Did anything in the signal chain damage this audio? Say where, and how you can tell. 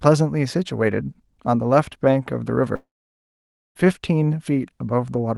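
Yes: a long network dropout from 2.75 to 3.77 s, likely at the network stage. About a second of speech never arrived. The receiver stretched the last sound into a fading buzz, then left roughly 0.9 s of near silence before speech resumed with that stretch missing.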